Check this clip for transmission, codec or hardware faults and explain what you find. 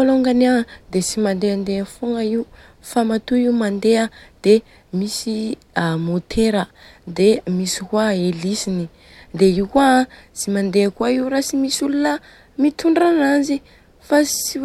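Nothing found: no faults anywhere in the speech.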